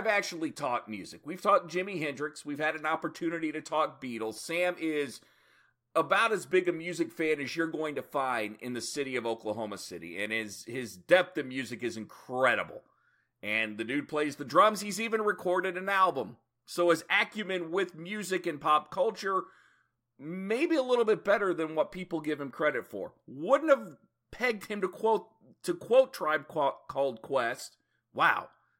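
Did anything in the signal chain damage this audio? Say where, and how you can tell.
No, the speech signal shows no damage at any stage of the chain, from capture through to playback.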